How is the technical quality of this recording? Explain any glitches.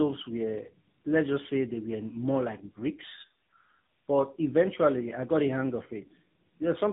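The technical quality is poor throughout, because of tandem speech coding. For the whole clip the speech sounds rough, muffled and warbly, which fits two low-rate speech codecs in a row, a GSM full-rate stage and then an AMR-NB stage, with a G.711 link between them. At each border the signal was decoded and then coded again, so the second coder had to model the first one's artefacts and added its own. On a spectrogram, nothing appears above 3.8 kHz, and the harmonics look smeared and blotchy. The waveform shows no dropouts or clicks.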